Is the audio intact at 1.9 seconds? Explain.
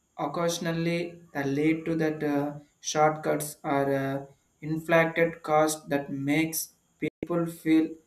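No. At 1.87 s the speech has a single sharp click, a brief break in the waveform. This is likely dropped samples: a handful, well under a millisecond, missing from the stream, so the signal jumps straight to a later value without losing any audible sound.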